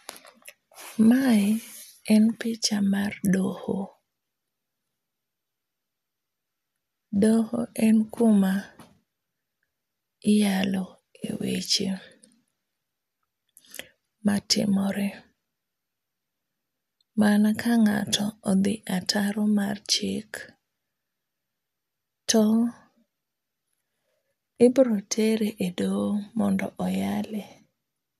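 No technical faults can be heard anywhere in this speech recording. There is nothing in it that needs a timestamp or a closer look.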